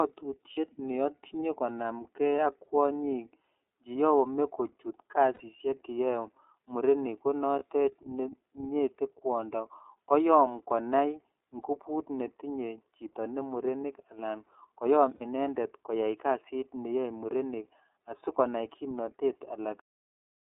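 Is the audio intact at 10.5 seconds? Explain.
No. The iLBC codec runs through the whole clip, including 10.5 s: the speech sits in a 150 Hz to 3.7 kHz band and sounds rough and synthetic, with each roughly 30 ms frame coded on its own. A plain telephone filter would narrow the band without that gritty texture.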